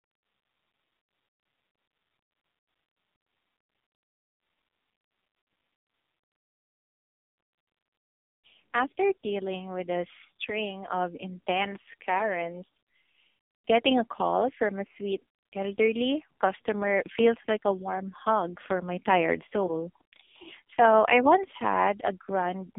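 From start to finish the speech carries heavy AMR narrowband mobile codec damage. The line is confined to roughly 250 Hz to 3.6 kHz, with nothing above 3.7 kHz. The pulse-driven vocal-tract model leaves a buzzy, synthetic timbre, which fits a low AMR-NB mode, near 5.15 kbps.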